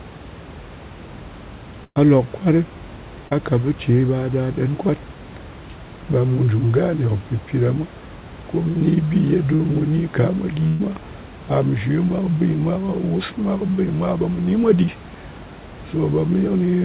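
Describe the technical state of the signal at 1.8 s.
A burst of packet loss from 1.84 to 1.99 s: the last sound is stretched and faded, then silence, and speech resumes about 120 ms further on, skipped rather than paused.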